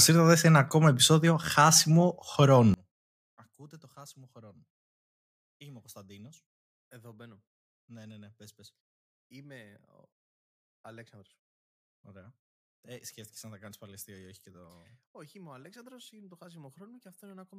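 From 2.74 s to the end, the speech collapses to a faint remnant, about 29 dB quieter, with the centred voice and low end nearly gone. The likely cause is one channel inverted, so summing to mono cancels everything the channels share.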